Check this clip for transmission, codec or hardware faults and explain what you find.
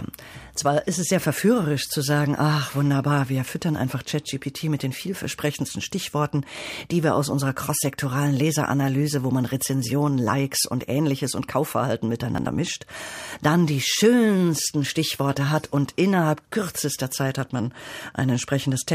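One fault stands out: a short burst of processor overload crackle from 12.35 to 12.47 s. For about an eighth of a second the speech turns gritty and torn, with a rapid string of tiny dropouts and sharp clicks riding over it before the sound clears. The processor fell behind and missed several buffer deadlines in quick succession, each of something like 10 ms. Each late buffer was simply skipped, leaving a hard-edged gap rather than repeated audio.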